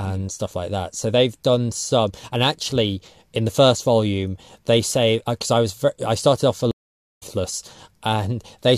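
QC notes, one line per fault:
6.71–7.23 s, stream reconnect: the speech drops out for about half a second, then picks up roughly half a second further on, so a chunk is simply skipped. That's the connection breaking, the player rejoining the live stream and starting a fresh decoder mid-stream.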